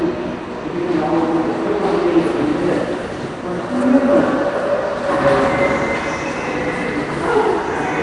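Throughout, the audio was likely squeezed through Nellymoser compression, whose coarse bit allocation starves weak bands and fills them with noise. The result is a rough, hissy halo and a smeared, underwater quality, with nothing above 10.6 kHz, which fits a rate near 44 kbps.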